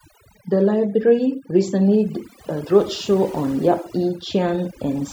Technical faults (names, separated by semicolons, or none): overdone noise removal